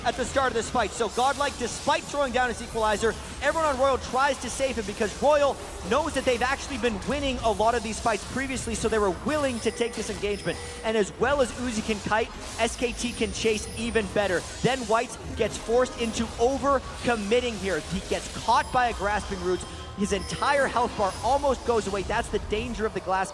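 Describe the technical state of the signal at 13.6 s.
At 13.6 s the signal is intact, with no audible fault at that point.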